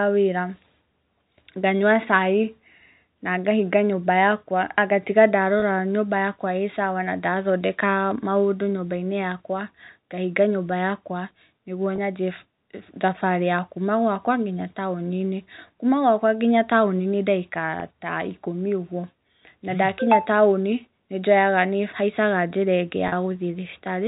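Speech carried over G.711 telephone coding loses packets four times, and the receiver covers each gap with packet loss with pitch repetition, replaying the last pitch period. Single 20 ms losses at 5.6 s, at 11.96 s just after "ngahinga nyũmba yakwa nĩguo", and at 17.8 s each come through as a brief held, buzzy blip. The 40 ms loss from 23.08 to 23.12 s, two packets, stretches that repeated cycle longer before speech resumes.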